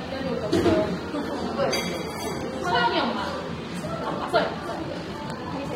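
Dull, smeared highs with a fizzy, warbling texture run through this sound recording. That points to AAC compression, likely AAC-LC at a low bitrate near 32 kbps, where coarse quantisation and a lowered cut-off leave the spectrum patchy. From 3.98 s to the end the pace jumps to about 1.68 times normal while the pitch holds, sounding rushed. That is a time-stretched section, where short pieces were likely dropped to squeeze the audio shorter without raising its pitch.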